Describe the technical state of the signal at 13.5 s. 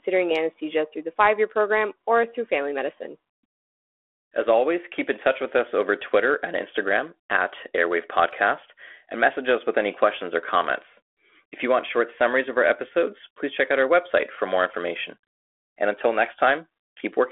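At 13.5 s the speech is intact, carried through G.726 ADPCM at 32 kbit/s within the telephone band, with no fault at that moment.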